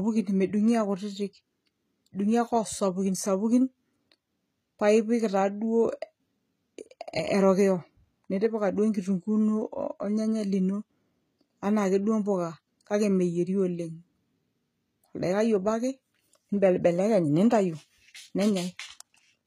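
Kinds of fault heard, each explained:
HE-AAC compression: The speech is plainly damaged, with nothing above 14.9 kHz, and s sounds turn gritty and metallic. Rebuilt treble is the likely cause, fitting roughly 20 kbps.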